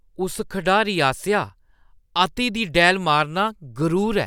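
No technical faults can be heard anywhere in the recording.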